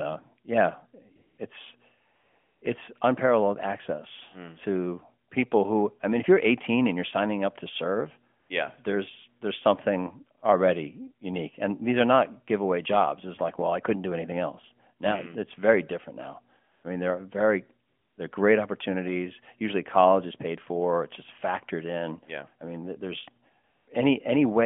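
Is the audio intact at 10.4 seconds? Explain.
No. From 10.40 to 10.42 s there is a brief AMR comfort noise patch. For 20 ms, about one codec frame, the sending side treated the signal as a pause and sent no speech frames, so the receiver filled the gap with synthetic noise built from a rough description of the background's level and spectral shape. It sounds like a tiny smooth, even hiss standing in for the real background. Unlike a packet-loss dropout, it neither falls silent nor repeats a stretch of preceding sound.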